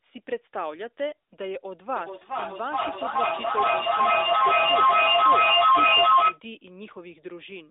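A second device on the same call replays this microphone's signal back into it, causing feedback echo between two devices from 1.96 to 6.43 s: repeats roughly every 400 ms pile up, peaking about 11 dB above the speech.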